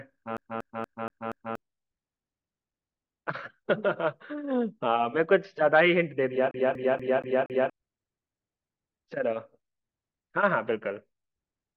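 A CD stuck on one turn hits this speech clip twice, from 0.37 to 1.55 s and again from 6.51 to 7.70 s. Each time a slice of about 0.24 s repeats five times with a brief mute at every jump, giving a fast, even stutter. A scratch is knocking the laser back one track at the same point on each rotation, so the player keeps re-reading that same short stretch before it moves on.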